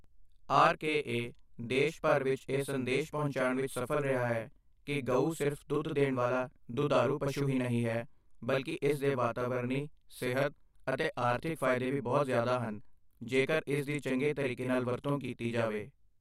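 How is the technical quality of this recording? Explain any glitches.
The recording has one fault, and it runs from start to finish. It is a channel delay, heard as doubling. One channel arrives about 42.7 ms late, which fits a 2048-sample buffer. When the two channels are summed to mono, the late copy stands apart. Every syllable is followed by an equally loud slap echo. The speech sounds doubled.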